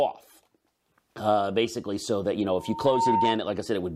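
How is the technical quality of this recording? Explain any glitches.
The recording has one clear fault, a loudspeaker feedback squeal near the end of the speech. Just after "so that you know", from 2.55 s to 3.42 s, a microphone picks up its own loudspeaker and the loop gain exceeds one at 911 Hz. That tone swells over about half a second to roughly 5 dB above the speech. It shows as a bright horizontal line on a spectrogram and a growing sinusoidal envelope on the waveform.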